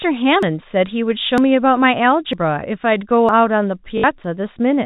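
At 0.43, 1.38, 2.33 and 3.29 s the speech jumps forward abruptly, each time dropping roughly a twentieth of a second. This is audio missing between chunks, likely from a recorder handling sound in 1-second chunks and losing a sliver at each changeover. The waveform shows a hard splice with no gap, and the spectrogram shows a thin vertical seam where formants shift instantly.

From 3.98 to 4.04 s, 60 ms of sound is replaced by packet loss with last packet repeated, which fits three lost 20 ms packets. The same short segment loops, producing a brief robotic buzz near 50 Hz. On a waveform it appears as identical repeating blocks, and on a spectrogram as evenly spaced vertical striations.

A final chunk-boundary skip follows at 4.24 s, matching the earlier ones in its abrupt join and missing fragment. Throughout, the G.711 telephone coding caps the spectrum at 4 kHz, visible as an empty band above that line.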